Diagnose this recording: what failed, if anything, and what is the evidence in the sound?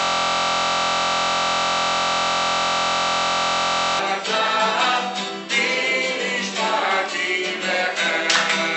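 The audio opens already in a system hang loop, running until 3.99 s. The driver or buffer stage has frozen while the hardware keeps replaying the same ring buffer. A 23.22 ms slice repeats exactly, well over a hundred times, which fits a 1024-sample buffer. Because the loop is so short, it sounds like a steady 43.1 Hz buzz rather than a stutter. Unlike mains hum, nothing else plays underneath it, and it stops abruptly when the system recovers.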